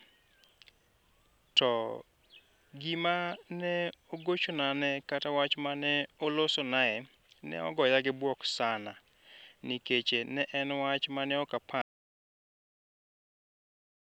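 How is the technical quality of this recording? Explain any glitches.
The recording's quality is let down by one fault at the end. After "mane ok", at 11.82 s, an audio dropout to silence cuts the speech off for the rest of the clip, likely from lost input while silence kept being written. There is no room tone at all, and it shows as a flat waveform line and a blank spectrogram.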